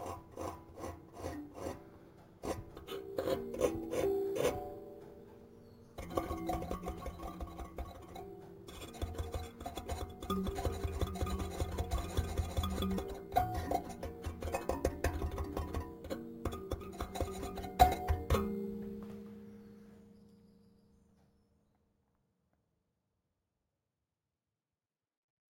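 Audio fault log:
Throughout, imaging from sample-and-hold upsampling: each sample was repeated without smoothing, mirroring the sound into 8–16 kHz at about -22 dB. This suggests a 16 kHz original and gives a metallic fizz that tracks the sound.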